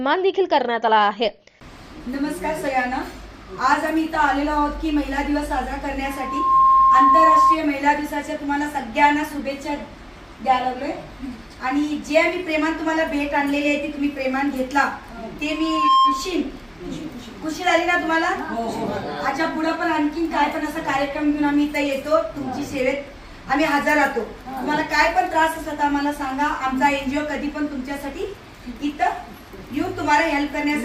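Loudspeaker feedback squeal at 6.04–7.59 s and 15.49–16.44 s: a mic-speaker loop exceeds unity gain, so a 1.1 kHz tone swells within about half a second to roughly 10 dB above the audio.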